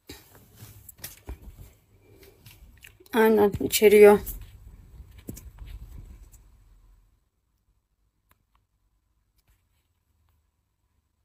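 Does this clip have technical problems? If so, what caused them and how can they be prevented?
No, nothing in this one sounds wrong, so there's nothing to track down or guard against here.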